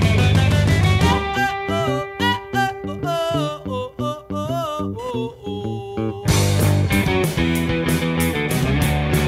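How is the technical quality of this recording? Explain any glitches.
One glitch stands out. From 4.99 s to the end, computer activity noise appears: a chirping buzz near 1 kHz, well below the sound. Processor or graphics load disturbs the shared ground. Unlike steady mains hum, it follows the computer's activity.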